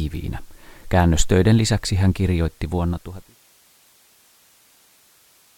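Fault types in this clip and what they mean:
No fault types occur in this clip.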